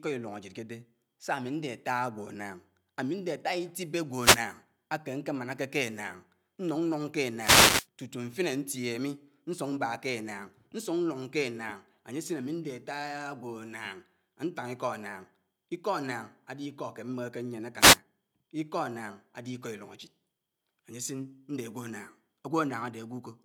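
Speech clip with three wireless microphone noise hits, at 4.16 to 4.43 s, 7.37 to 7.87 s and 17.78 to 17.99 s, each a brief swish of static over the voice. The analogue FM radio link is fading as reflected signals cancel, letting receiver noise rise and momentarily mask the audio.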